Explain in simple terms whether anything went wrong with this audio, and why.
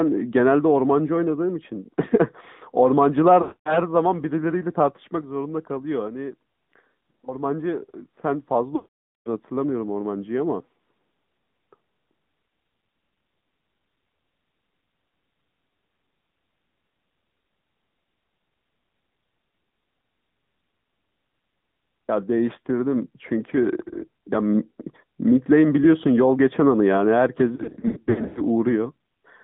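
The speech was sent through the AMR narrowband mobile codec, the compression used on older 2G and 3G phone calls. It keeps only the range from about 150 Hz to 3.7 kHz and rebuilds the voice from a simplified model of the throat and mouth rather than the actual recorded sound. Throughout the clip, this makes the voice sound muffled and clearly buzzy, with an artificial, synthetic edge.

There are also lost AMR speech frames, where radio errors corrupted chunks of the signal. When a chunk failed its check, the decoder filled the gap by repeating the last good voice settings at steadily lower volume. From 3.42 to 3.79 s and again from 8.76 to 9.28 s, the sound stretches out oddly and then fades to silence before the voice returns. From 27.56 to 28.42 s, the losses are shorter and scattered, so the voice flickers with quick dips and warbles instead of dropping out completely.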